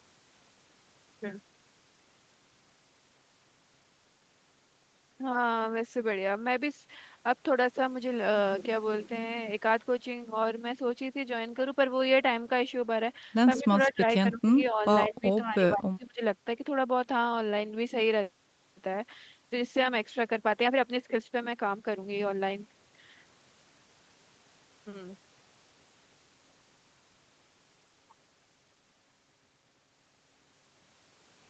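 Echo leak at 13.56 to 13.62 s in this speech recording: a faint delayed copy of the voice played on the loudspeaker, roughly 15 dB down and trailing by about 177 ms, slips through, likely because a loudspeaker-side echo canceller left part of its microphone pickup unremoved. Speech suppressed in double talk follows at 13.58 to 13.67, 13.87 to 14.02, 14.22 to 14.47, 14.70 to 14.85, 15.09 to 15.26 and 15.45 to 16.22 s. The voice dips in pieces, from barely at 14.70 s to roughly 30 dB over the long last stretch, likely as the canceller mistakes overlapping talk for echo and ducks both. The whole call sits within an 8 kHz band from the Opus path.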